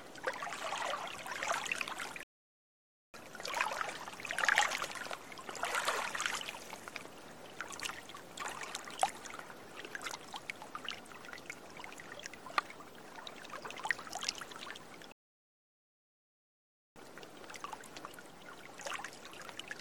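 A recording of everyday sounds with two rebuffering stalls, at 2.23 to 3.14 s and 15.12 to 16.96 s, adding about 0.9 s and 1.8 s of silence. Unlike a dropout, playback resumes exactly where it stopped, so nothing is lost.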